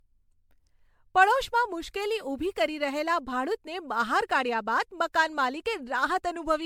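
A speech recording with generation loss running through the whole clip. The sound is swirly and smeared, with a hollow, holed-out top end. Consonant attacks are blurred rather than crisp. The damage is heavier than a single lossy pass would leave. The likely cause is repeated MP3 decoding and re-encoding, around seven times, at a rate that fits 96 kbit/s. Each pass requantises on a shifted frame grid, so noise and spectral gaps pile up.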